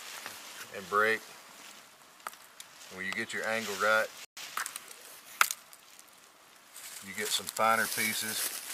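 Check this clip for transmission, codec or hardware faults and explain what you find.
Two faults sit back to back near the middle. A playback stall runs from 4.25 to 4.37 s: the audio drops out for 120 ms, likely because the player ran short of data or its thread was blocked. It shows as a flat gap in the waveform and a blank vertical band on the spectrogram. A time-compressed catch-up follows from 4.37 to 4.61 s: the player trims its backlog by cutting and cross-fading short pieces, so the sound runs 1.5 times fast at normal pitch. On the spectrogram, events crowd closer together while their frequencies stay put.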